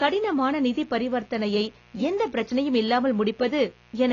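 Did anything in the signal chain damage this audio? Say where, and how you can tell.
Yes. There's a raspy mains buzz through the whole clip, sitting about 30 dB under the speech. The 60 Hz harmonics point to a grounding or shielding problem in the analogue wiring.

The speech also sounds dull and smeared, with nothing above 7 kHz. That's likely AAC compression at the codec stage, at a low bitrate around 24 kbps, cutting off the top end.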